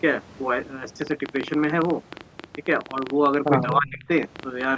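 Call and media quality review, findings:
Train of clicks, 1.02–4.65 s: irregular ticking around 13 per second, roughly fifty pulses peaking well above the speech; likely external interference or a struggling interface injecting repeated pulses.

Speech suppressed in double talk, 3.79–4.09 s: talker dips by roughly 20 dB over about 300 ms; echo canceller likely could not separate the talker from loudspeaker echo and attenuated both.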